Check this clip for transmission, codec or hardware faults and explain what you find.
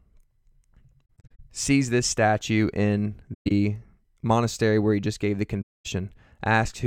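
The speech has AAC frame loss with muting at 1.05–1.40 s (scattered short gaps), 3.34–3.51 s (one long run) and 5.62–5.86 s. The decoder zeroed the lost frames' spectrum, so overlapping windows fade the sound out and back in, leaving soft-edged silent holes.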